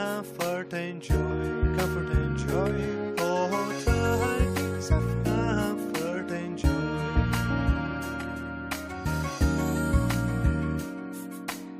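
No technical faults can be heard anywhere in this audio.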